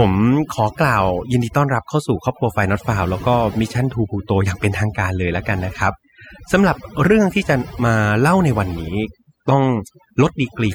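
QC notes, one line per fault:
Throughout, overdone noise removal: aggressive spectral gating mutes bands near the noise floor, leaving near-silent gaps with twinkling specks; spectrogram shows patchy, holed texture.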